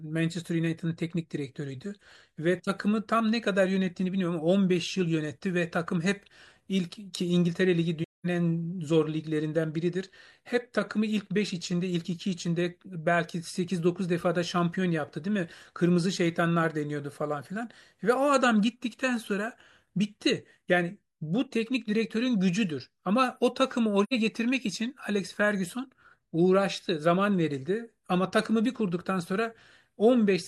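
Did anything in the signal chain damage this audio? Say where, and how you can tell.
Yes, in the codec. AAC frame loss with muting leaves soft-edged gaps at 8.03–8.26 s and 24.03–24.13 s. The decoder zeroed the lost frames, and the overlapping windows faded the sound out and back in.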